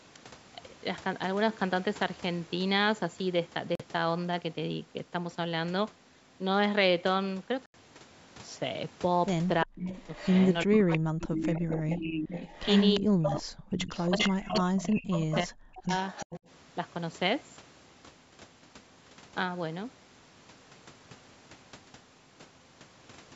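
At 3.75 s and again at 7.66 s the audio drops out completely, for about 43 ms and then 83 ms, and then resumes. These are Bluetooth stalls, likely caused by interference delaying packets until the headphone buffer ran empty. A waveform shows flat silent gaps, and a spectrogram shows clean vertical blank strips.

From 9.64 s onward, speech suppressed in double talk appears at 9.64–9.96, 10.65–11.44, 11.95–12.36 and 13.00–15.92 s. The level dips sharply, by up to about 40 dB. The likely cause is an echo canceller that could not separate the talker from the returning echo and so attenuated everything. These passages show as ragged notches and fading energy across the band, with the longest stretch lasting about two seconds.

An echo leak overlaps these passages at 9.77–11.96 and 12.34–14.78 s, with short bursts at 15.13 and 16.09 s. A copy of the speech returns 350 ms late, about 5–15 dB quieter, likely from loudspeaker pickup on one side that was not fully cancelled. 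A spectrogram shows this as duplicated speech patterns shifted right by 0.35 s.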